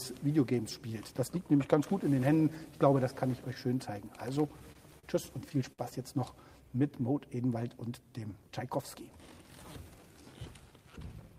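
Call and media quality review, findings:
Repeated stalls (stutter), 4.36 to 5.05 s: audio drags and catches five times, about 90 ms filled in all, longest hold 40 ms. Jitter buffer keeps running dry on late packets. Receiver stretches the last sound each time, nothing lost.

Short stall from a late packet, 5.72 to 5.80 s: one held sound, roughly 59 ms, slight buzz or dip. Delay jumps 59 ms, buffer empties, concealment bridges the gap, playback resumes in place.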